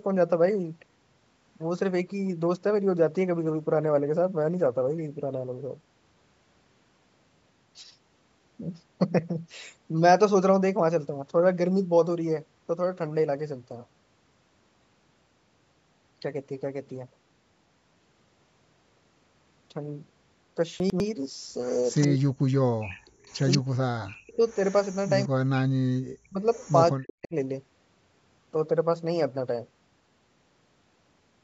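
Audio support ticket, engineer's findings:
Jumbled moment at 20.8 to 21.0 s. Chunks out of order: one 100 ms chunk was written a chunk late, so it plays after its successor. Nothing missing, but the swapped sequence leaves three hard joins.

Repeat of the far talker trailing about 189 ms behind, at 21.63 to 22.08, 22.89 to 23.58, 24.49 to 25.09 and 26.54 to 26.74 s, faint to moderately loud. Echo leak, likely from a loudspeaker-side echo canceller letting residual pickup through and sending it back.

Near talker dips hard, sometimes to near silence, in patches at 22.06 to 22.9, 23.57 to 24.44, 25.27 to 26.46 and 26.97 to 27.34 s, each overlapping the other side talking. Speech suppressed in double talk, likely the echo canceller mistaking local speech for echo and attenuating both.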